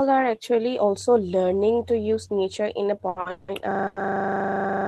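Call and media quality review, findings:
Call and media quality review, findings:

Brief held sounds at 3.08–3.17 s (80 ms), 3.20–3.26 s (50 ms) and 3.87–3.97 s (90 ms), each with a slight buzz or dip, then speech resumes. Short stall from a late packet: jitter buffer empty, last sound stretched, nothing dropped, delay grows by that amount.

3.30–3.49 s, speech replaced by a fading buzz or hiss for 180 ms, no silence, then picks up where it stopped. Call audio freeze, likely packets held in transit: jitter buffer drained, receiver extended the last sound, gap inserted, no speech missing.

3.71 s to end, steady 25 Hz rattle-buzz: one 40 ms slice repeating continuously. System hang loop: host or driver stalled while the audio hardware kept replaying the same ring buffer; roughly two seconds of speech lost.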